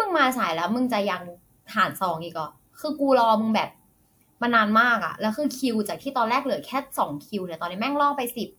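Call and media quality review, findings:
Nothing to flag here; the speech comes across fine with no problems heard anywhere in the clip.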